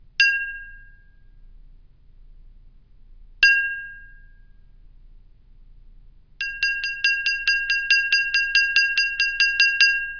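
No technical faults are audible.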